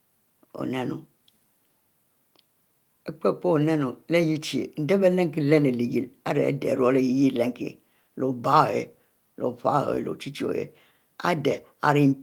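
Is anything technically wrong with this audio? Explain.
No, nothing technically wrong stood out on listening to this speech recording.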